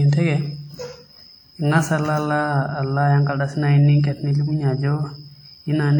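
Throughout, the speech has likely passed through WMA compression at a rate that fits about 48 kbps. Coarse quantisation in its transform blocks smears noise over tens of milliseconds, giving plainly audible ringing, washiness and hiss that breathes with the speech.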